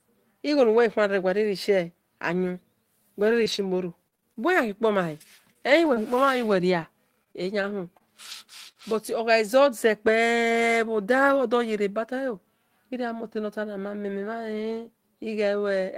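Speech with brief ticks, smears and hiccups, first from 3.27 to 5.98 s and again from 6.82 to 8.83 s. These are scattered short gaps: lost or late packets, each hole up to about 40 ms, were patched by continuing the preceding sound, about ten times in the first stretch and four in the second.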